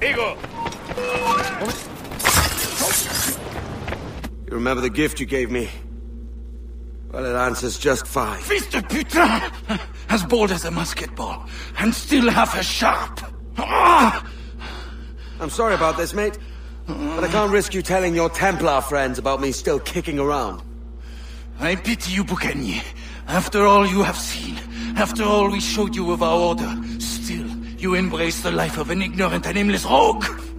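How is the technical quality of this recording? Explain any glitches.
No technical faults can be heard anywhere in the recording. There are no glitches to explain.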